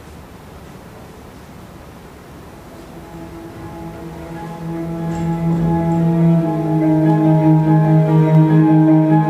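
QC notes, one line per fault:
6.85–8.60 s, periodic USB or driver dropouts: about seven ticks, one every 0.25 s, each a sub-millisecond sliver of audio skipped when the bus or driver stalls.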